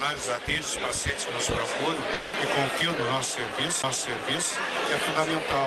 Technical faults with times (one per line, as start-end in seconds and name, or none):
2.13-2.35 long network dropout
3.82 CD skip